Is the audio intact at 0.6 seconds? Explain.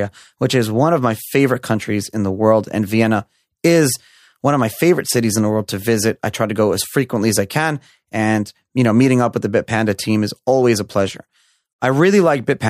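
Yes, at 0.6 seconds the speech is intact, with no dropout, click, distortion or other fault at that moment.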